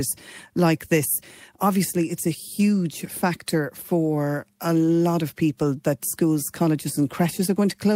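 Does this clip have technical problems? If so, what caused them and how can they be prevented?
No, there are no technical problems to report.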